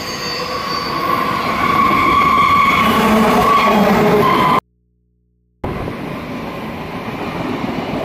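An audio dropout to a faint residue cuts the sound abruptly at 4.59 s, and it returns just as suddenly at 5.64 s, leaving a gap of about 1.05 s. Through that gap only a low mains hum remains, roughly 45 dB below the signal. The likely cause is a brief loss of the source while the input stayed open. On a waveform the gap shows as a near-flat band with hard edges, and on a spectrogram as an empty block crossed by thin hum lines at the bottom.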